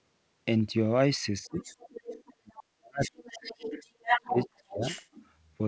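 From 1.45 s the speech dips briefly, by about 15 dB, until 1.6 s. A faint second voice enters at the same moment, roughly 20 dB below the talker, and lingers to 2.34 s. That second voice is the other side's voice leaking through. The talker's loudspeaker is likely feeding the far end back into the microphone, and the echo canceller has not fully removed it.

The worst speech suppression in double talk runs from 2.37 to 3.46 s. There the talker nearly vanishes, falling by about 40 dB for around a second. While the speech is held down, the leak returns in scraps at 3.0 to 3.1 s and again from 3.28 to 3.9 s, about 15 dB under the speech. The likely cause is that the canceller, faced with both sides talking at once, cannot tell the talker from the echo and attenuates everything.

Two more suppressions follow, from 3.98 to 4.37 s at about 35 dB and from 4.56 to 4.83 s at about 30 dB. Overlapping them, from 4.08 to 5.26 s, the leaked voice rises to only about 5 dB below the talker, almost level with it. 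The audio also carries nothing above 8 kHz, which fits the G.722 codec at 64 kbps on the call path.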